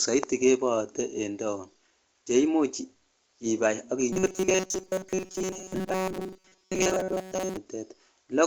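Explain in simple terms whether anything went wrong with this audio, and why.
Several things went wrong, all tied to timing between the two ends of the call.

The first is clock drift between sender and receiver. The sending device's clock ran about 5 percent faster than the receiving one, so audio arrived slightly quicker than it could be played. Unlike a single dropout, this mismatch lasts the whole clip.

To cope, the receiver made repeated timing corrections from 0.15 s to 8.28 s, trimming small pieces so playback kept pace with audio arriving at roughly 105 percent speed. These show up as small, unevenly spaced hiccups and a slightly unsteady pace rather than clear gaps.

From 4.13 s to 7.57 s there is robotic sound from repeated short buffers. The speech turns into a rigid, metallic buzz at 188 Hz, which matches a snippet of about 5 ms being looped while most of the real audio is skipped. 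This is likely caused by new audio arriving too seldom. Unlike the mild hiccups, it gives the voice a rigid buzz that follows the original only roughly.

The G.722 call codec leaves nothing above 8 kHz, so the speech sounds somewhat dull, as expected for this kind of call.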